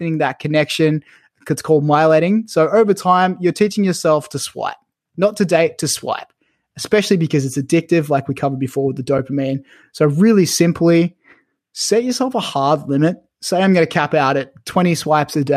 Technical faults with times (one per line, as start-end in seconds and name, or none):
9.18 AAC frame loss with muting